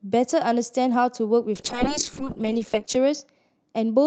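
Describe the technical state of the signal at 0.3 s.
At 0.3 s the speech is intact, with no dropout, glitch or other fault, only the steady band-limiting of the call codec, which holds the audio below about 8 kHz.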